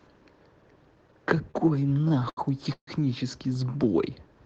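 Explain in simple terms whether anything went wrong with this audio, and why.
Between 1.51 and 2.90 s the speech has repeated stalls, or stutter. Parts of the call arrived late, so playback ran dry ten times. Each time, the last sound was stretched, up to 142 ms, until more arrived. Nothing is lost, but it drags.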